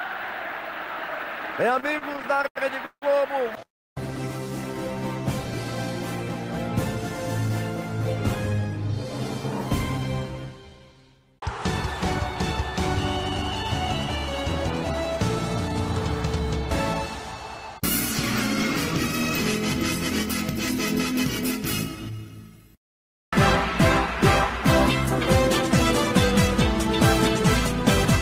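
From 1.73 to 3.63 s there are repeated stalls (stutter). Packets reached the receiver late, so its jitter buffer emptied 17 times. Each gap was bridged by extending the preceding sound, the longest for 165 ms, adding 418 ms with nothing lost. The audio drags and stammers, with concealment filling about a fifth of that stretch.

Right after, from 3.65 to 3.98 s, the audio halts and the bridging fades to about 300 ms of silence before resuming where it stopped. This is likely a call audio freeze, with packets held up in transit. It inserts 306 ms of added delay, and none of the sound is missing.

Jitter buffer speed-up follows at 7.49 to 8.94 s and again at 22.11 to 23.32 s. The buffer had grown past its target, so the receiver trimmed short pitch-period slices repeatedly, roughly 50 ms and then 40 ms in total. Playback runs at 103% speed at unchanged pitch.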